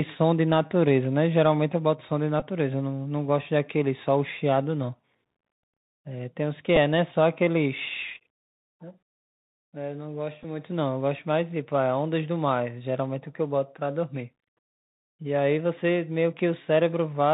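The whole clip passes through the Bluetooth CVSD headset codec, running at 64 kbps, and the damage is plainly audible. The coder sends one bit per sample, saying only up or down, with a step size that adapts. Nothing above 4 kHz survives, so the speech sounds narrow and boxy. Sibilants turn scratchy where fast high energy outruns the step. A fine granular hiss sits under the speech.

Three Bluetooth headset packet repeats break in. At 2.40 s about 15 ms of audio is replaced, which fits four lost packets. The chip decodes the last good packet again and again, every 3.75 ms. That gives a brief rough buzz near 267 Hz. At 6.76 s and 10.43 s about 7.5 ms is lost each time, which points to two packets.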